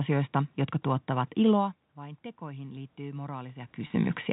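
From 1.96 s to 4.05 s the automatic gain is rising. Shortly after the talker moves away from the microphone at around 1.5 s, the input level falls by about 18 dB, and the gain control slowly pushes its gain up by about 5 dB over roughly two seconds. Because it amplifies the whole signal, the voice and the room noise swell together. On a waveform the envelope and the noise floor between syllables climb steadily. On a spectrogram the background band brightens across all frequencies at the same time.

From 3.87 s to 3.90 s there is packet loss with pitch repetition. About 30 ms of audio is missing, which fits a single lost packet. To fill the gap, the receiver repeats the last pitch period and fades it out, so the sound briefly holds a slightly buzzy, frozen tone before normal speech resumes. On a spectrogram the harmonics run flat and unchanging for that stretch, with nothing above 4 kHz as expected from the G.711 telephone path. 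On a waveform the same cycle repeats with shrinking amplitude.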